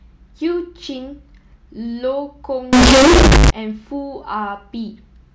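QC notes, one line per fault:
2.73–3.50 s, float read as integer: speech turns loud, harsh and nearly square at an almost fixed, high level, with background noise as loud as the speech, though pitch remains traceable. Likely 32-bit float samples read as 32-bit integers, so sign and exponent bits set each value.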